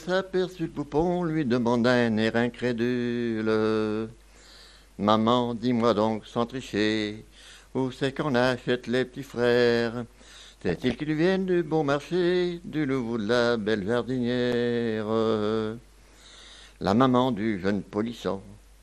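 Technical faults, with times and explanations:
Throughout: MP2 compression. The whole clip sounds dull and plainly gurgling, with a granular roughness on sustained sound and upper bands that seem to flicker in and out. This is likely MPEG Layer II coding at a low rate, around 80 kbps. Too few bits shut off the top sub-bands and quantise the rest coarsely. Unlike burbling, the damage is steady and even rather than bursting out at particular moments.
9.35 s and 14.52 s: block of digital silence. At each point the sound drops to silence for about 5.8 ms and returns with no fade, so it is heard as a sharp tick rather than a gap. Both holes are the same length, which fits a 256-sample buffer that was not filled in time. This is not codec dropout: the signal vanishes completely and the hard edges make the click.
10.69–11.01 s and 16.08–16.32 s: DAB burbling. For roughly a third and a quarter of a second, short blips of noise break over the sound in single sub-bands. 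Bit errors, at a low rate well under one percent, slipped past error correction into a run of MP2 frames and corrupted samples. Unlike the steady compression dullness, these are short, lively bursts that come and go.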